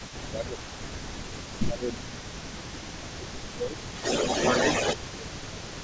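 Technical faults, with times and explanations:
0.0–1.1 s, 1.66–2.42 s, 3.0–3.39 s, 3.55–3.79 s and 5.13–5.78 s: speech suppressed in double talk. The talker's level dips by roughly 15 dB in bursts, up to about 0.7 s each, and the sound turns thin or drops out in fragments. This is likely the echo canceller's suppressor, which cannot separate the near talker from the simultaneous far-end signal and attenuates everything while both are active.
0.0–2.21 s: echo leak. A faint delayed copy of the speech trails about 0.4 s behind, sitting about 20 dB below the direct signal, so it is heard as a soft repeat. This is likely a loudspeaker-to-microphone path that the far end's echo canceller did not fully cancel, letting residual pickup return down the line.
2.39–5.83 s: echo leak. The delayed copy now arrives about 0.29 s late and is roughly as loud as the direct speech, producing a strong doubled, overlapping sound. 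The much higher level points to the far end's echo canceller likely removing little of the echo here.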